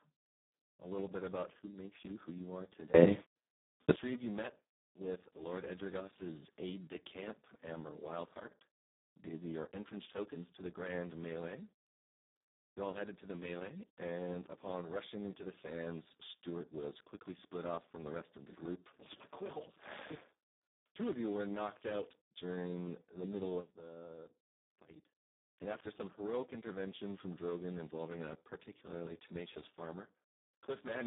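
The whole clip runs through the Speex codec at a very low setting, and it's heavily damaged. The speech comes out hoarse and grainy, edging toward robotic, which fits something around 4 kbps, where the CELP coder has almost no bits left to describe the excitation. The band is narrowband telephone style, roughly 150 Hz to 3.7 kHz, with nothing at all above about 3.8 kHz, so there's no noise-like fill up top, just a dull, boxed-in sound.

At 2.94 s, right after "you who you are", everything jumps up by about 24 dB in an instant, speech and background noise together, and it stays loud until 3.96 s, just before "three of you met". That's a sudden gain jump, likely a digital gain setting applied with no ramp.

At 23.6 s, after "out during the middle", there's another sudden gain jump, this time down by about 12 dB. The speech and the noise floor both sink at once and stay low until 25.2 s. Again it's likely a gain change switched in without any smoothing.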